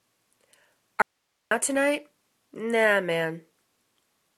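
The signal feed was interrupted for about half a second while the downstream path stayed live, most likely a momentary break in the source connection or input stage. The result is an audio dropout to a faint residue: at 1.02 s the sound cuts off abruptly, leaving only a thin bed of hiss roughly 55 dB below the normal level, and at 1.51 s it snaps back mid-flow, with no fade at either edge.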